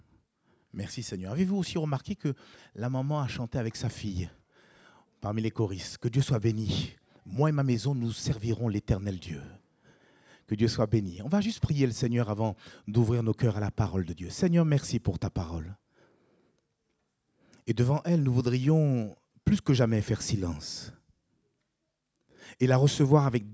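Nothing is technically wrong with this audio, which has simply passed through a call's normal microphone processing and carries nothing above 8 kHz.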